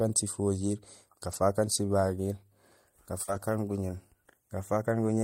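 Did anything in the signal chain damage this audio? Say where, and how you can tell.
Yes, the network leg dropped packets in two places, and the Opus in-band forward error correction rebuilt them at the decoder. Around 1.27 to 1.37 s and again from 3.27 to 3.41 s, the sound turns rougher and grainier without any gap. About 60 ms and 80 ms of audio are coming from the low-bitrate backup copies carried in the following packets. That fits a few separate lost packets each time.

There's also a short concealed packet loss right next to the second spot, at 3.23 to 3.29 s. About 40 ms arrived too late or not at all, so the receiver extrapolated the last bit of sound to fill the hole and then crossfaded back into the real stream. You hear it as a brief smear or wobble, which runs straight into the rougher FEC-rebuilt patch after it.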